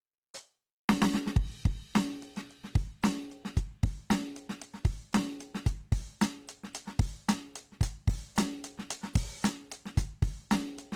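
A music clip with Opus compression damage, plainly audible throughout. Tones come across rough, grainy and noisy rather than clean. Content still reaches about 20.3 kHz, so the band has not narrowed, and there is little of the swirling hollowness of MP3. That combination likely comes from Opus in its CELT music mode at a very low bitrate, fitting roughly 16 kbps, where starved bands are refilled with folded or noise-like energy.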